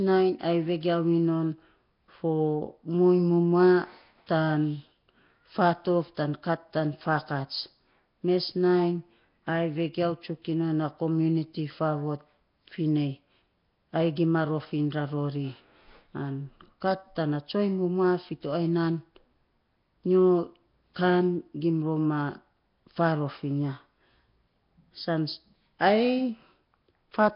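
Throughout, the speech sounds hissy, smeared and underwater, with nothing above 5.3 kHz, likely heavy Nellymoser compression; noise-filled bands rather than metallic warble distinguish it.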